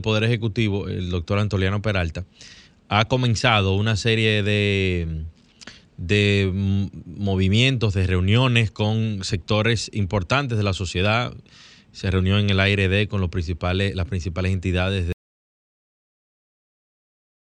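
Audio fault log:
15.13–17.52 s, audio dropout to silence: right after "principales las principales entidades" the speech cuts off mid-flow and the clip ends in silence. The input was likely lost, through a disconnected device, a failed link or a mute, while recording carried on writing silence. Unlike a natural pause or a fade-out, there is no decay and no room tone or noise floor under the gap, just a hard switch to nothing.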